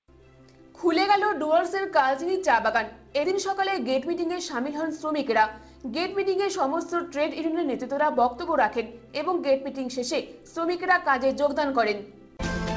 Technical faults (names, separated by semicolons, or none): none